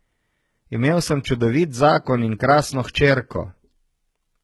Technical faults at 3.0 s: HE-AAC compression

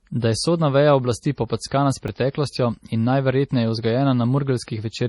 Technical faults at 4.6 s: MP3 compression

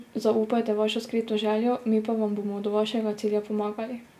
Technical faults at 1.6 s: none

